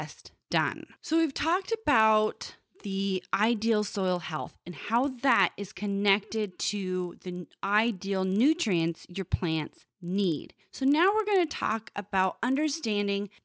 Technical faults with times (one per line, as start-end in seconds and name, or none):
0.00-13.44 resampler restarted on every block